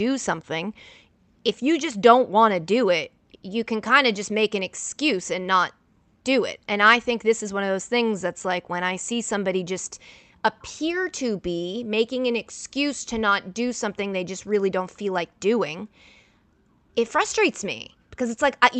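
Speech over a WebRTC call path, with the band topping out around 8 kHz as the codec setting would give, and no technical faults to report.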